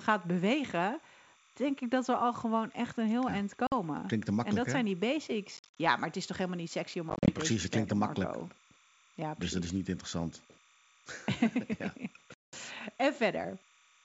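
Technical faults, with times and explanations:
Throughout: timecode bleed. A faint chirping warble sits about 35 dB under the speech, flipping between tones near 1 and 2 kHz at the 29.97 frames/s code rate. It's linear timecode leaking in from a neighbouring track or cable.
3.67–3.74 s, 5.57–5.77 s, 7.10–7.37 s, 12.34–12.58 s: packet loss on an ADPCM call. There are hard-edged holes of 50 ms, then 150 ms and 120 ms scattered in short runs, then 190 ms, which fits roughly 10 ms packets. The decoder's predictor loses sync, so speech returns slightly distorted before settling.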